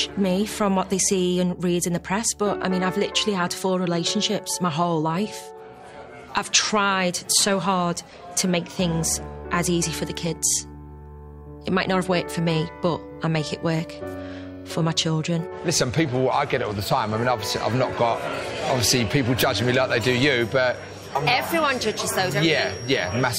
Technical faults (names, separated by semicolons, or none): feedback whistle